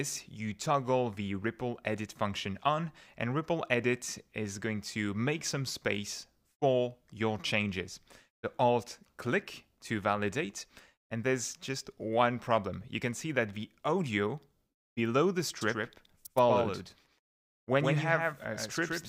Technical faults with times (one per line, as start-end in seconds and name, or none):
15.61-19.09 doubled audio track